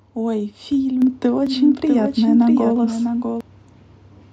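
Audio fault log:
1.02 s, microphone volume stepped up: The level of the speech and the background noise rises together in a single step of about 5 dB, with no fade. A gradual rise would suggest the talker moving closer. The software instead judged the input too quiet and raised the device's input volume at once. Everything recorded afterwards, noise floor included, sits higher, which is why the room sound jumps along with the speech.
1.47–3.41 s, doubled audio track: A second full-band copy of the speech plays alongside the original, trailing it by roughly 0.7 s and sitting around 5 dB quieter. It has no decay tail or room colouring, so it is not a reflection. It is the same signal laid over itself. The copy starts and stops abruptly at the edges of this span. The likely cause is a second, slower capture path mixing in the same audio.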